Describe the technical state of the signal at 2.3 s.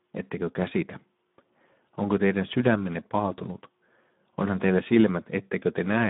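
At 2.3 s, as throughout, Speex codec damage: starved CELP excitation, fitting a low bitrate near 11 kbps, makes speech hoarse and noisy. A spectrogram shows smeared harmonics within 150 Hz–3.7 kHz and nothing above 3.8 kHz.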